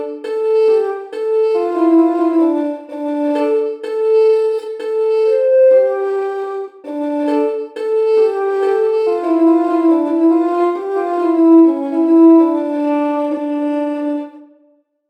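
No technical faults can be heard anywhere in this clip.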